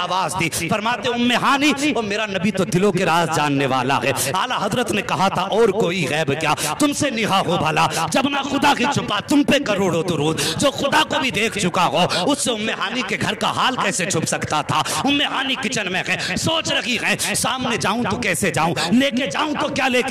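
No technical faults can be heard anywhere in this audio.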